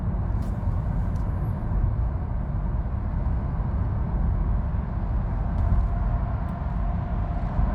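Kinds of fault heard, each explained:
No kinds of fault are heard in the audio.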